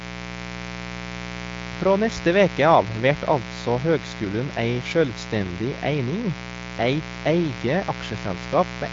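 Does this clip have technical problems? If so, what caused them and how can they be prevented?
Yes. Mains buzz runs throughout: a dimmer, rectifier or unshielded cable let sharp switching spikes into the signal twice every 60 Hz cycle, spreading harmonics into the kilohertz range. The result is a steady, raspy buzz under the speech, quite loud, roughly 10 dB below it. Prevent it with properly shielded, balanced cabling, kept away from dimmers and power supplies.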